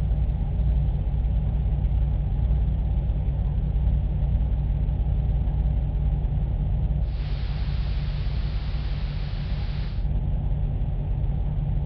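From 7.0 s to 10.1 s the receiver shows digital radio blending to analogue. It loses the digital stream and cross-fades over about 0.27 s to the station's AM broadcast. Level drops about 3 dB and hiss rises to roughly 20 dB below the signal, then the digital feed returns.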